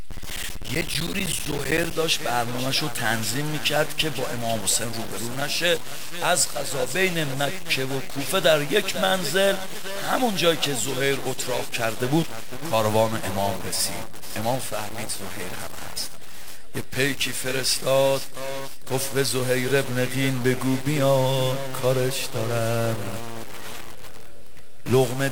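From the start and for the whole clip there is distortion, and the pauses are filled with a gritty noise floor. This is a stuck bit, likely from a broken data line or converter. On a waveform, about half the samples are off by the same step, and a spectrogram shows broadband hash.

Between 0.11 and 1.91 s, periodic USB or driver dropouts cut around 10 ms of audio every 64 ms, some thirty times. Each is replaced by silence and heard as a regular tick. The waveform shows evenly spaced flat gaps, and the spectrogram shows thin vertical lines.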